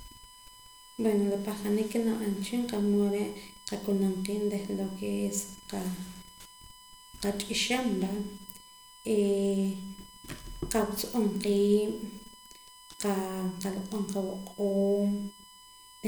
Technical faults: USB whine

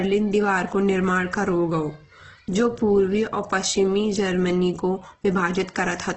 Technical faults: Opus compression

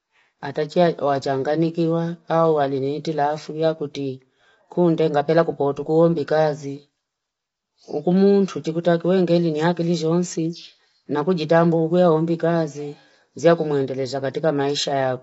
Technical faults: low-delay AAC compression

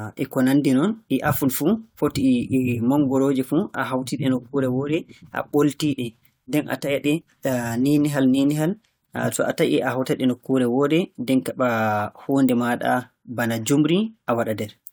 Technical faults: none

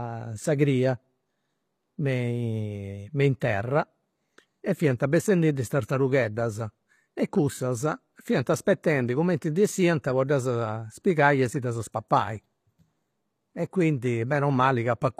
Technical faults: HE-AAC compression

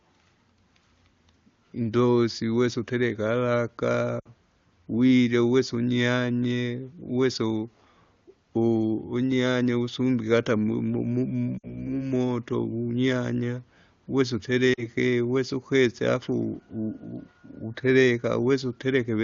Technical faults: lost AMR speech frames

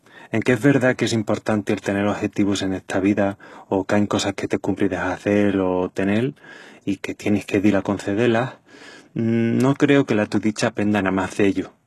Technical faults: HE-AAC compression

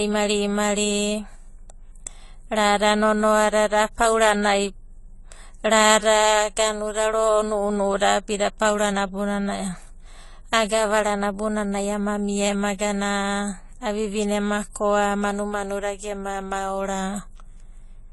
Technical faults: AAC compression

